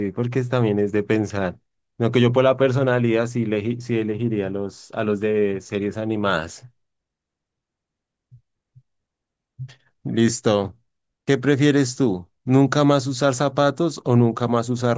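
No dropouts, clicks, distortion or other faults are audible anywhere in the speech.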